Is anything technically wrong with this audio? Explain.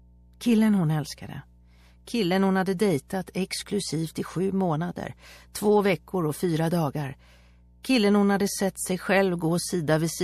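Yes, there are two faults. Throughout, mains hum: a ground loop or nearby transformer is feeding the 60 Hz power line into the signal, leaving a steady low tone sitting roughly 30 dB below the programme.

Pre-echo occurs at 2.05 to 2.07 s, 2.77 s, 3.08 to 3.10 s, 5.52 to 5.55 s and 7.83 s. The codec's coding noise, sized for each loud attack, is spread across the whole transform block, which fits a long window of about 36 ms with no switch to short blocks. So a hiss about 11 to 17 dB above the background appears 16 to 23 ms before each attack, blurring its onset.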